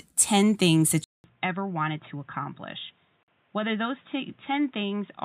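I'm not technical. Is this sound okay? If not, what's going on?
No, there are two problems. At 1.04 s the sound cuts out for about 200 ms, then comes back duller, boxier and noticeably quieter, with faint new background noise that stays to the end. That's most likely an input switched to a poorer device: the recording jumped from one microphone to a poorer one, or to a headset in call mode, which carries a narrower range of sound.

Then at 3.23 s there's a brief hole, about 48 ms of silence, before the sound picks up right where it left off. That's a gap at a join of encoded pieces. The audio was compressed in separate chunks and then stuck together without trimming the little bits of padding the compressor adds at the start and end of each chunk, so that dead space got left in the middle.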